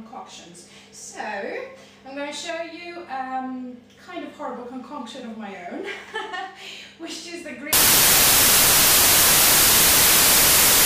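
The audio runs cleanly until 7.73 s, when it abruptly turns into loud, harsh broadband noise that continues to the end at 10.86 s. This is samples built from the wrong bytes: each sample's bytes are being misassembled, so the rapidly fluctuating low-order bits land in the high-order positions and dominate every value. Unlike clipping or overload distortion, which roughens the original sound but leaves it recognisable, this replaces it with broadband noise.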